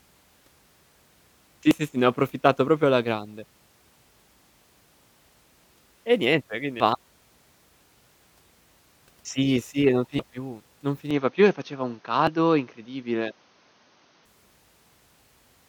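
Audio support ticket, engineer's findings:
Damaged data in compressed stream: brief glitches at 1.71 s (just before "sì sì ne ho"), 6.80 s (after "niente quindi"), 12.27 s, plus a longer 10.16–10.20 s blip after "sì e non". Corrupt frames; the decoder loses sync and resyncs at the next header.

Input switched to poorer device: 11.1–14.3 s, the sound goes dull and boxy, with nothing above 6.4 kHz, a new noise floor roughly 45 dB under signal, and no gap or clear level step. Likely cause is a mid-recording switch to a narrower-band input.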